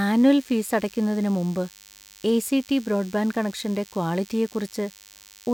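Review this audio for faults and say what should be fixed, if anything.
A DECT cordless phone buzz runs under the speech for the whole clip, a thin, rasping 100 Hz tone well below the voice, produced as a nearby handset or base station pulses its radio every 10 ms and the audio circuitry rectifies those bursts. Unlike smooth mains hum, it sounds gritty and rich in harmonics. Keep DECT phones and base stations away from microphones, preamps and cables, or use shielded balanced wiring.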